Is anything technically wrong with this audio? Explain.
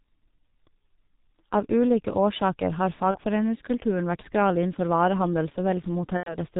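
Yes. The whole clip carries heavy G.723.1 codec damage. Nothing above 4 kHz survives, so the speech sounds muffled and hoarse. Consonants smear because the codec works in coarse 30 ms frames and updates its voice model slowly. The thinness fits a rate near 6 kbit/s.

There is also VoIP packet loss concealed by the speech codec, twice. From 3.11 to 3.18 s, right after "ulike årsaker har", about one 30 ms frame goes missing. From 6.17 to 6.37 s, roughly 90 ms is lost, which points to three frames. The decoder fills each gap by stretching its last pitch and filter at falling gain. That produces a fading buzzy tone or coloured noise, and the speech stays weak briefly afterwards.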